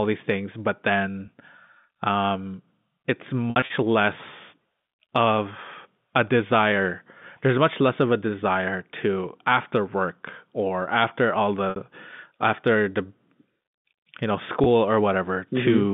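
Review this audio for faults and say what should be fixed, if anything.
Packet loss with pitch repetition occurs at 1.26 s after "these things but", at 11.70 to 11.76 s after "work or after all", and at 14.64 s after "you know". It also occurs from 3.50 to 3.70 s. The receiver repeats the last pitch period to cover each lost packet. The 20 ms gaps sound like a brief buzzy hold. The 60 ms run after "work or after all" fades further. The 3.5 s stretch has several gaps spread over 200 ms. A larger jitter buffer or forward error correction on the link would stop these dropouts.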